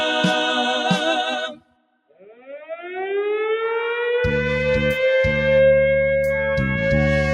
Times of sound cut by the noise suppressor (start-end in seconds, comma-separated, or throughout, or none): 1.45-2.78